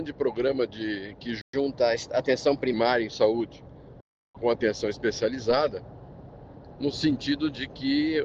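At 1.41 s the sound cuts out abruptly and stays silent for 120 ms, ending at 1.53 s. This is a playback stall: the output simply stops mid-flow and then resumes. The likely cause is the player running short of buffered data or its audio thread being held up, leaving the output with nothing to send until it recovered.

Straight after the gap, from 1.53 s to 2.73 s, the audio runs fast. This is catch-up at higher speed: the player resamples its backlog at 1.1 times normal rate to recover the lost 120 ms, so tempo and pitch rise together, the pitch by roughly one and a half semitones. The result is a brief hurried, sharp stretch that drops back to normal speed and pitch at 2.73 s.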